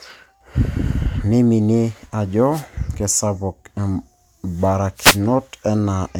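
An analogue FM radio link drops out briefly twice in this speech, a wireless microphone noise hit each time. Reflected copies of the transmitter's signal arrive out of phase and cancel, so the receiver loses carrier strength and its own noise surges up. From 2.51 to 2.65 s, then again from 4.96 to 5.21 s, a swish of static rushes over the voice. The later fade is the longer of the two.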